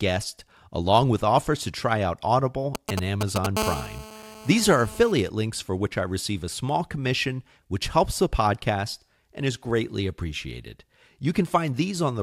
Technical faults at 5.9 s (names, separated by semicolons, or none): none